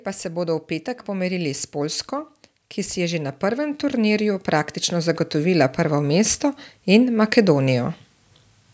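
From 2.93 s to 7.95 s, automatic gain rising lifts speech and background together by about 10 dB, the waveform envelope and spectrogram brightness swelling steadily.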